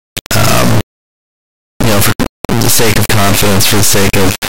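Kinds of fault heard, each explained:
Integer read as float: the speech was stored as 32-bit integers but decoded as 32-bit floats, so each sample's bit pattern becomes a meaningless number, tiny or enormous. Throughout the clip the output slams between silence and the clipping limit, an extremely loud square-wave buzz that collapses to silence in the quietest moments. On a waveform it looks like a solid block pinned at a flat peak level with flat gaps; a spectrogram shows broadband energy smeared to the top.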